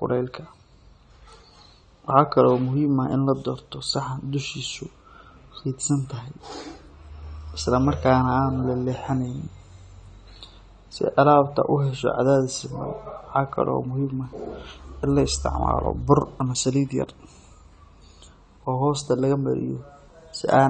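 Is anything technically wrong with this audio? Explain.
Yes. Throughout the speech, the sound is dull and smeared, with nothing above 9 kHz and a plainly audible warbling, fizzy texture on sibilants and held sounds. This is likely AAC compression: coarse quantisation and a lowered cut-off, which fits a bitrate near 32 kbps.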